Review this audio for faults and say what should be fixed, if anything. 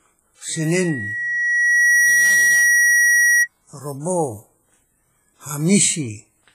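Loudspeaker feedback squeal runs from 0.53 to 3.48 s. A single 1.9 kHz tone swells over roughly a second and a half. It ends up about 5 dB above the speech. The microphone picks up its own loudspeaker, and at that frequency the loop gain exceeds one. To prevent it, lower the gain, move the microphone away from the speaker, or notch out 1.9 kHz.

Heavy codec damage is heard throughout. The speech rings and sounds washy. A hiss rises and falls with it. Nothing remains above 15.3 kHz. This is likely WMA compression, where long transform blocks smear quantisation noise across tens of milliseconds. The damage fits a bitrate near 24 kbps. To prevent it, encode at a higher bitrate or keep a lossless master.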